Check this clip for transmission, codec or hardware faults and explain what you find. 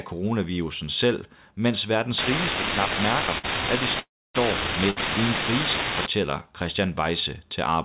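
Three kinds of fault are present in this speech clip, all carried over a call path whose band stops at 4 kHz, consistent with G.711 mu-law.

Unreliable data bit, 2.18 to 6.07 s, starting just after "coronavirusen selv mens": one marginal data line flips its bit in a random share of samples, and each flip adds a spike of identical size. The result is a continuous crackle or fizz that persists through pauses.

Short stall from a late packet, at 3.38 to 3.46 s and 4.90 to 4.98 s: a packet missed its playout slot and the jitter buffer emptied, so the receiver held the last sound for 56 ms and 60 ms respectively before resuming where it left off. Each stall sounds like a briefly over-held sound with a slight buzz or dip, and nothing is lost.

Call audio freeze, 4.00 to 4.36 s: the audio stops for 348 ms. The last sound carries on as a fading buzz, and about 270 ms of that is silence before the speech resumes exactly where it paused. 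A gap has been inserted, with nothing dropped. The likely cause is packets held up in transit until the jitter buffer ran dry.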